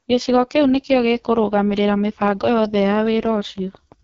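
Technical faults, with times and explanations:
Throughout: AMR wideband (HD Voice) codec damage. The speech sounds rough and raspy, with heavy coding damage that fits the lowest 6.6 kbit/s mode, and nothing above about 7.4 kHz. Unlike a plain low-pass, the top band carries shaped noise rather than real detail.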